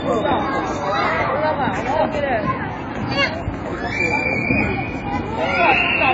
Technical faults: AAC compression

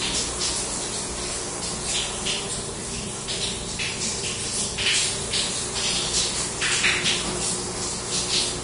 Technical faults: Vorbis compression

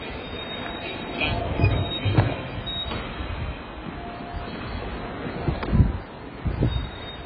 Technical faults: AAC compression

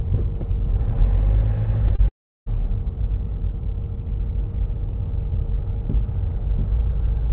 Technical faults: short concealed packet loss; long network dropout

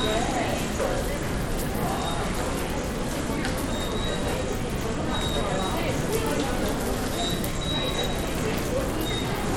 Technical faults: Bluetooth SBC compression

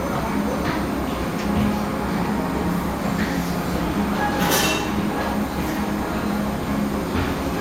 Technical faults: none

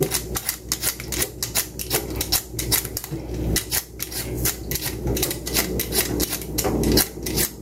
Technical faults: gain pumping

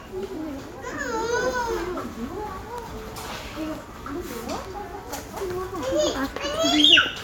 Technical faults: none

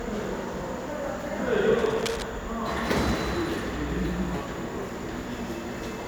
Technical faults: cable scratch noise

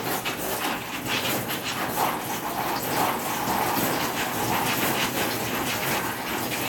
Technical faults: doubled audio track

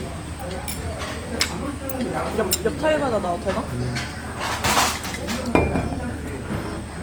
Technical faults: Opus compression

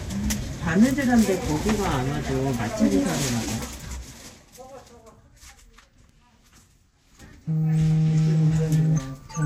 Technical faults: zipper noise

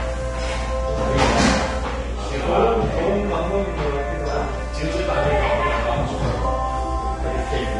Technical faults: Vorbis compression

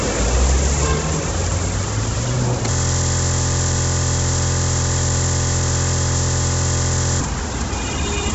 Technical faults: Bluetooth LC3 compression; system hang loop

